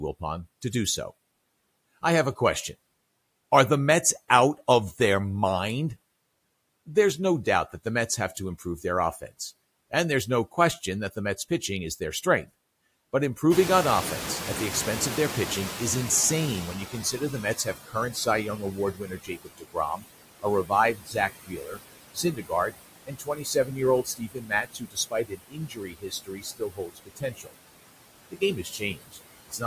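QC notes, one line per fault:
Throughout: noise suppressor artifacts. The suppressor lowers the steady background by about 20 dB frame by frame. Noise sinks in the gaps and returns under the speech. On a spectrogram the noise floor is patchy and speckled, with isolated time-frequency blobs flickering on and off. On the waveform the floor between phrases pumps down and up with each utterance.
13.51–17.78 s: noise suppressor catching up. At about 13.5 s the room noise jumps by about 20 dB and ends up only about 12 dB below the speech. The suppressor's noise estimate lags behind the jump. The louder background comes through with little reduction at first and then sinks gradually over about 4.3 s as the estimate adapts, until it is being cut by about 15 dB. On a spectrogram a broadband band of noise appears abruptly and fades over those seconds. On the waveform the floor steps up and then decays.
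16.92–18.26, 18.58–20.04, 20.4–21.81, 22.14–22.74, 23.05–27.53 and 28.31–29.63 s: speech cut by the noise suppressor. With the background now close to speech level, the suppressor mistakes parts of the speech for noise. Soft consonants, word endings and quieter stretches are pulled down by about 13 dB at the shallowest and about 22 dB at the deepest. They sound swallowed or faint. This is briefest in the 16.92 s and 22.14 s spans and most sustained from 23.05 to 27.53 s, where roughly 3 s of speech is affected. A spectrogram shows speech harmonics and fricative energy abruptly blanked in patches. The waveform shows word tails clipped short and dips inside phrases.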